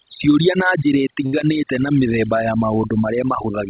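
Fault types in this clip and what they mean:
Overdone noise removal: a noise reduction stage set far too aggressively pulls individual frequency bands down or out wherever they sit near its noise estimate, so the background drops and breaks up into twinkling specks.
Short stall from a late packet: a packet arrived late and the jitter buffer ran dry, so the receiver stretched the last sound by 68 ms until it came, just after "na njĩra" around 1.26 s, holding that moment too long with nothing lost.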